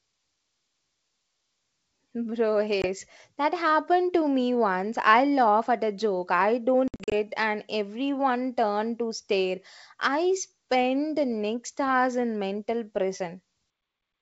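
Packet loss on an ADPCM call drops audio to silence and leaves the decoder's predictor and step size out of step with the sender's. At 2.82 to 2.86 s, one packet's worth, about 20 ms, vanishes as a hard-edged gap. Between "at a joke I" and "and everyone turned to", from 6.88 to 7.14 s, about 160 ms goes missing in gaps spread over 240 ms, the longest 60 ms. The pattern points to roughly seven lost packets, and the speech resumes slightly distorted before settling. The G.722 wideband coding at 64 kbit/s carries a faint upper-band hiss.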